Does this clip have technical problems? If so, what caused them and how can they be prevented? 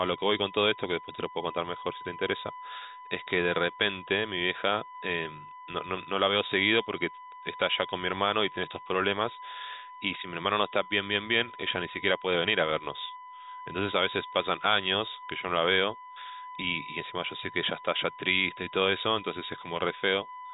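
Yes. A steady, fixed-pitch whine at 1 kHz runs under the speech for the whole clip, sitting only about 15 dB below it, so it stays clearly audible through the telephone-band sound, which stops at 3.8 kHz. This is USB whine: current drawn by the USB bus in regular 1 ms frames leaks through a shared power or ground path into the audio, producing a tone at the frame rate. To prevent it, use a powered hub or a USB ground-loop isolator, or power the audio interface separately.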